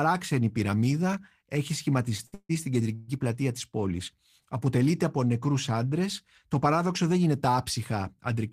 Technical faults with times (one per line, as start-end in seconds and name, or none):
2.26-2.34 short stall from a late packet
2.34-2.51 call audio freeze
2.95-3.10 call audio freeze